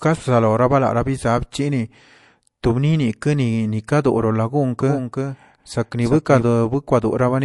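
MP3 compression runs through the whole of this speech recording and is plainly audible. The sound is likely squeezed through a lossy encoder with too few bits, which fits a low bitrate near 48 kbps. Weak frequency components drop in and out from frame to frame, giving a watery, swirling texture. S sounds chirp metallically, and consonant attacks smear. A doubled audio track appears from 4.80 to 6.42 s. A second full-band copy of the speech trails the original by roughly a third of a second at about 5 dB lower. It likely comes from an edit or a slower capture path holding two copies out of step. The copy carries no room tail or decay of its own, and it switches on and off abruptly at those two points.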